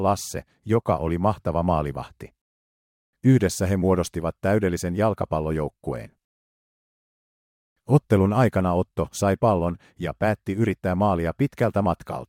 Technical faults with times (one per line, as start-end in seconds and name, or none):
none